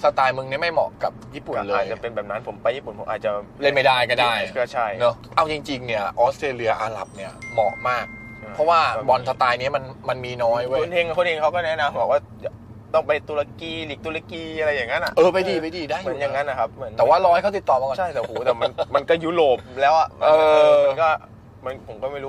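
From 6.10 to 6.86 s and again from 14.34 to 15.25 s, the sound slows by 5.8% and drops about a semitone (104 cents), then snaps back. This is likely a drift correction step. On a spectrogram, every harmonic steps downward together and jumps back at the end.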